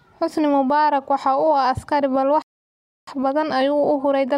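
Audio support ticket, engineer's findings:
Playback stall, 2.42 to 3.07 s: speech cuts to silence for about 0.65 s right after "askari balse", then resumes. Likely player buffer underrun or blocked audio thread, output starved of samples until recovery.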